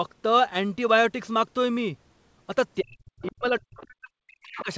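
From 2.8 to 4.7 s the talker's speech is suppressed in double talk, most likely because the echo canceller could not separate near speech from loudspeaker echo during simultaneous talking. The voice dips and breaks up for roughly 1.5 s in total, falling by as much as about 40 dB. On a waveform the envelope collapses in pieces, and the spectrogram shows gaps punched through the harmonics.

Inside that stretch, the other side's voice leaks through, likely as loudspeaker echo the canceller left in the microphone signal. It appears at 3.22–3.32 s and 3.79–3.86 s, about 25 dB below the speech, and then more strongly at 4.56–4.74 s, about 15 dB down. These faint scraps show as brief, weak harmonic patches in the spectrogram, confined like the rest of the call audio to below 8 kHz.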